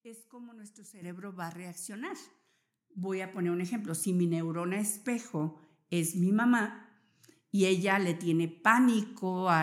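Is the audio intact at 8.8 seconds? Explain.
Yes, the speech at 8.8 seconds plays through intact, with no audible fault at that moment.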